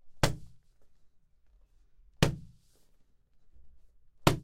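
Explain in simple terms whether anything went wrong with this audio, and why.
Nothing went wrong here: the recording holds steady the whole way, with no dropouts, glitches or damage to the sound at any point.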